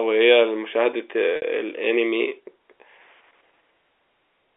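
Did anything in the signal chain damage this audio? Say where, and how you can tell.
Yes, packet loss with pitch repetition damaged the audio at the network stage. At 1.36 to 1.42 s, a 60 ms gap (consistent with about six 10 ms packets) is concealed by repeating the last pitch period. The sound holds briefly, fades to silence, then speech cross-fades back in. At 2.99 s a single 10 ms loss gives only a slight buzzy hold. On a spectrogram, both spots show frozen, evenly spaced harmonics with no formant movement; the waveform shows identical repeated cycles. The G.711 telephone band around them shows clean edges.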